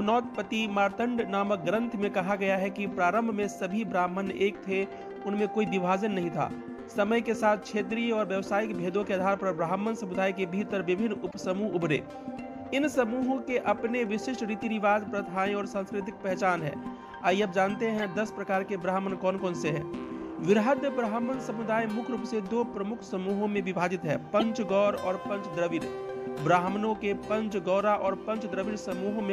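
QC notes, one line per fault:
11.30–11.38 s, corrupt frame decoded: a short noisy squeak peaking at about -30 dBFS. Damaged bits across several frames put energy at wrong frequencies.
12.66 s, corrupt frame decoded: a brief blip around -35 dBFS. One damaged frame decoded anyway, so energy lands briefly at wrong frequencies.
17.98–18.04 s, corrupt frame decoded: a chirpy burst reaching about -25 dBFS. A few consecutive frames carried misread gains or codes.
24.39–24.43 s, corrupt frame decoded: the loudest blip, near -15 dBFS. A single bad frame played with wrong gains or misread codes, causing a burst of noise.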